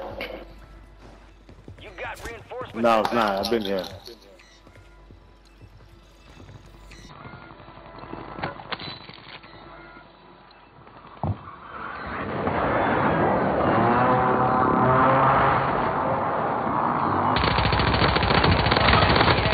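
At 7.09 s the audio turns dull and boxy with no gap, and stays that way to the end: nothing above 4.5 kHz survives, the level shifts by about 5 dB, and a faint new noise floor, roughly 50 dB below the signal, comes in. The abrupt, lasting change in bandwidth, tone and background points to an input switched to a poorer device, likely a second microphone or a headset's narrowband call profile taking over mid-recording.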